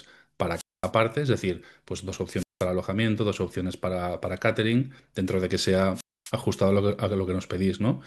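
Wireless microphone squelch dropouts break the speech three times: from 0.52 to 0.92 s, 2.35 to 2.67 s, and 5.94 to 6.32 s. Each time the radio link fades, hiss swells, and the receiver's squelch cuts the output, leaving near silence for about 0.23 s, 0.18 s, and 0.26 s. That swell of static before each hole sets it apart from a digital packet dropout, which cuts out cleanly with no hiss.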